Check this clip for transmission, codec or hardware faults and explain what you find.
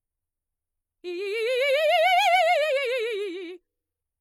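The music carries a codec fault from start to finish: transcoding between lossy codecs. The likely cause is low-bitrate MP3 re-encoded as HE-AAC, with artefacts that fit rates near 50 kbit/s. The second encoder spends its bits on the smeared, warbling residue of the first and adds its own swirly, synthetic high end, so both kinds of roughness sound together. A spectrogram shows a hard ceiling at 20.4 kHz and patchy, blocky fill below it.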